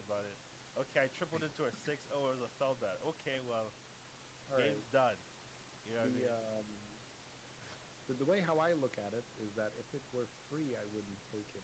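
Nothing stood out on listening to this speech; the call microphone processing leaves nothing above 8 kHz, and the room noise sits about 19 dB below the speech.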